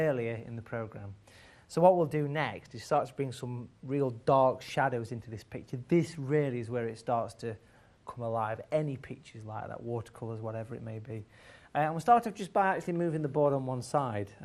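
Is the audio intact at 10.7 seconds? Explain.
No. At 10.7 seconds the sound carries the same MP2 compression damage heard throughout the clip. It is dull, with a gurgling, granular texture. Upper frequencies drop in and out. The likely cause is MPEG Layer II coding at a low rate, which fits about 80 kbps. The codec splits the sound into 32 sub-bands and shares out bits. With too few bits, high bands switch off and the rest are coarsely quantised.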